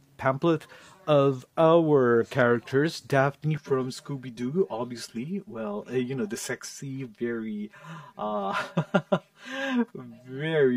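From 3.58 s to the end, one channel arrives roughly 5 ms later than the other, and when the two are combined to mono the shared content cancels at evenly spaced frequencies. This is channel delay (comb filtering): the first notch falls near 100 Hz, with further gaps repeating up through the spectrum. The sound turns hollow and phasey, thinned in a fixed, regular pattern that stays in place for the rest of the clip.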